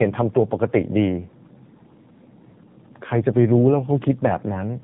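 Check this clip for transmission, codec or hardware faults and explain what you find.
The clip shows one fault running its whole length: tandem speech coding. The speech seems to have passed through two AMR-NB-style coding stages in a row, with a plain telephone-law link between them. Each stage re-encodes speech already damaged by the one before, so the errors stack. The result is rougher, more muffled and more warbly than one pass would be. On a spectrogram, energy stops sharply at about 3.7 kHz, and the harmonics look smeared and unsteady.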